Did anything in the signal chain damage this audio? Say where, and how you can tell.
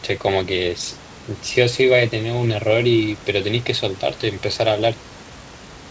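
No, nothing in the signal chain damaged this audio. Room noise sits about 20 dB below the speech, and the content stops at 8 kHz, which fits a wideband call codec such as G.722 on a normally working call path.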